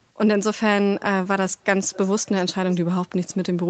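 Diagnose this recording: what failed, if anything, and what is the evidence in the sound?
Faint speech copies, 429 ms late and well below the original, appear at 1.01 to 1.05 s and 1.92 to 2.08 s: likely echo leak past a call's echo canceller.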